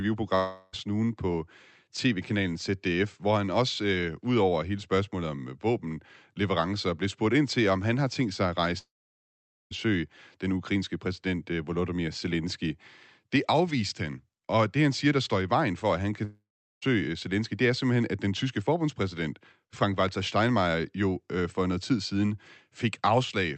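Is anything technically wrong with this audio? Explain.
Yes. The speech has three gaps that sound like a long network dropout, likely from packets lost on a call link. The first runs from 0.35 to 0.75 s. It is filled entirely with a fading buzz, with no silence. The second runs from 8.79 to 9.73 s, right after "har tænkt sig at". The buzz dies quickly, leaving about 0.84 s of silence. The third runs from 16.25 to 16.89 s, after "for at han kan", with about 0.4 s of silence. In each case the receiver stretched the last sound to hide the loss; in the second and third it then gave up. Speech resumes later, and the lost part is gone. The call codec's cut-off near 8 kHz, consistent with Opus, is also present.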